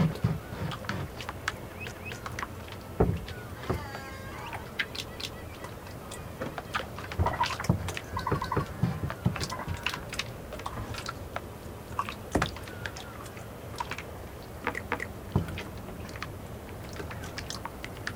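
Overlapping chunks repeat 250 ms of sound at 1.92, 5.17, 8.42, 11.67 and 14.92 s. Each 3 s chunk starts before the last ends. The joins stutter regularly.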